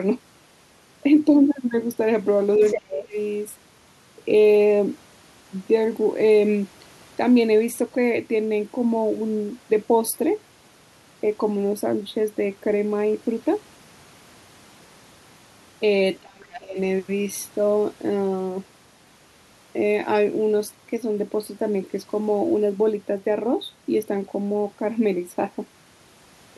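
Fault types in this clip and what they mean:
Speech suppressed in double talk: when both ends talked at once, the echo canceller likely could not separate the near talker from loudspeaker echo and turned everything down, so the speech sinks by about 20 dB at 2.59 to 3.14 s and about 30 dB at 16.2 to 16.78 s.
Other side's voice leaking through: the echo canceller likely left part of the far-end loudspeaker signal in the microphone, so a second voice comes through at 2.62 to 3.0 s, only a little quieter than the talker, and again as a faint brief scrap at 16.52 to 16.6 s.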